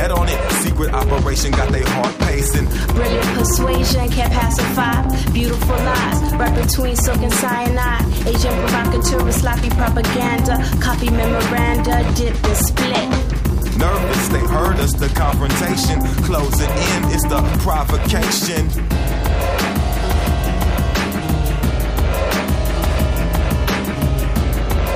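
No technical faults can be heard anywhere in this audio.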